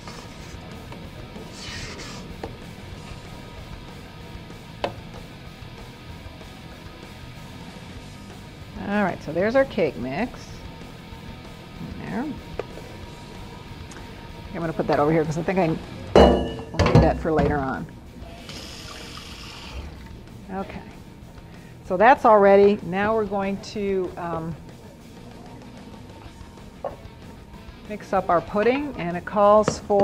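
Nothing to flag here: no audible technical faults anywhere in the audio.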